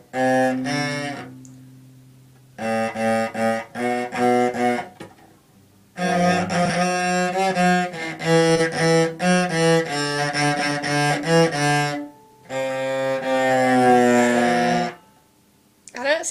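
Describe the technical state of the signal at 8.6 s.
A brief garbled flutter runs from 8.55 to 8.60 s. This is frames out of order: two neighbouring blocks were decoded in swapped sequence, which fits single 20 ms frames exchanged, so nothing is lost.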